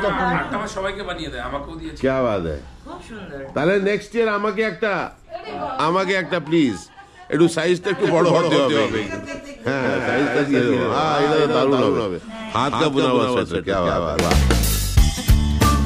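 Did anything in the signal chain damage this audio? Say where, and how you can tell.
Yes: a doubled audio track from 8.02 to 14.26 s, likely from a slower second capture path. The spectrogram shows every event repeated about 0.2 s later, roughly 5 dB quieter, with abrupt edges.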